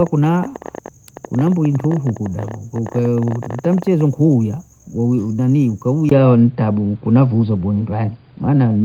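The input likely switched to a poorer device at 6.09 s. After a 20 ms gap, the speech turns dull and boxy, with nothing above 4.8 kHz.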